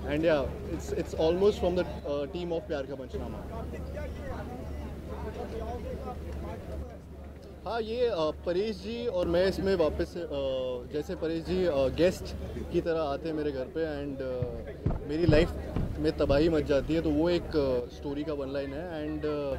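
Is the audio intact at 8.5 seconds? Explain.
No. One stereo channel likely drops out from 6.83 to 9.23 s, so the mono sum abruptly falls by about 6 dB throughout that span.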